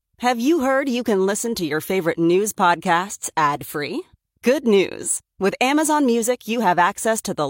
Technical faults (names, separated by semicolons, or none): none